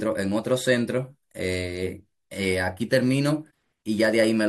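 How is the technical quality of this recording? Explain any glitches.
There is one glitch. At 3.50 s the speech jumps abruptly ahead with a small blip, likely a stream segment skipped, where a segment failed to load and playback resumed at the next.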